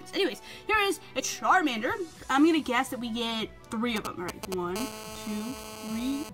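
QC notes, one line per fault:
1.19 to 1.21 s, damaged data in a compressed stream: a brief glitch. Corrupted bytes made the decoder misread frames, lose sync and hunt for the next frame header. Unlike the GSM interference, it is a single, non-repeating codec glitch.
3.96 to 4.77 s, GSM signalling bursts: a galloping dit-dit-dit of short 217 Hz buzzes, only a few decibels below the sound. A nearby 2G phone sends intermittent radio bursts while signalling, and the audio circuit rectifies them, giving grouped bursts rather than a steady buzz.
4.77 to 6.29 s, GSM phone buzz: a hard, raspy, continuous buzz at 217 Hz, rich in harmonics and about 11 dB below the sound. The phone is now in a call, transmitting 217 bursts per second that the audio circuit rectifies. This steadiness separates it from the earlier signalling pattern.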